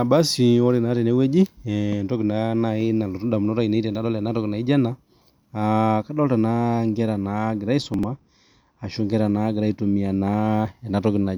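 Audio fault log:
7.82–8.91 s, channel delay (comb filtering): one channel trails the other by roughly two samples, a few hundredths of a millisecond, so the mono sum cancels high up, first notch near 10 kHz. The top end dulls without a hollow mid. The notches stay fixed, unlike a sweeping flanger.
7.94–8.03 s, chunks out of order: a block of about 46 ms plays one chunk late, after the block that should follow it. Nothing is missing, which sets it apart from a dropout. The sound briefly jumbles, with three hard joins.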